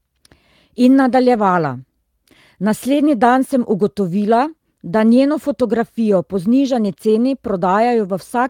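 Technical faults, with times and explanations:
1.33–1.39 s and 6.87–6.89 s, lost packet rebuilt from error correction: two short stretches, the second right after "da njeno fotografijo po", turn rough and a bit noisy without dropping out. The decoder is playing the low-bitrate backup copy carried in the next packet, the first patch fitting about two packets' worth, the second one.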